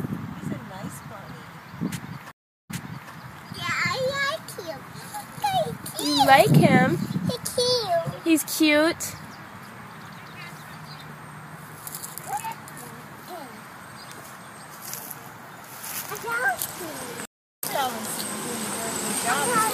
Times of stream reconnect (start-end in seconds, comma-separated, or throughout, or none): 2.31-3.12, 17.25-17.64